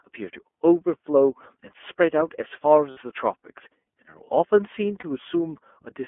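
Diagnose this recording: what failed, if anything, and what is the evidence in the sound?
The codec stage is at fault throughout. This speech has the iLBC codec's narrowband sound: on a spectrogram, energy sits between about 250 Hz and 3.4 kHz with nothing above, and a rough, slightly synthetic texture is plainly audible. The codec rebuilds each frame's excitation independently, which fits its 13.33 kbps mode with 30 ms frames. The coarse excitation modelling produces the grainy harmonics, which look smeared in the spectrogram.

Lost iLBC frames, a network loss, break the speech at 2.91 to 2.98 s (60 ms) and 5.00 to 5.05 s (30 ms). Each gap sounds like a held, faintly buzzy vowel. The decoder concealed the missing packets by repeating the last pitch cycle with added noise. In the waveform, the periods repeat with a noisy overlay, and the spectrogram shows frozen harmonics. Because iLBC frames stand alone, normal speech returns immediately after each gap.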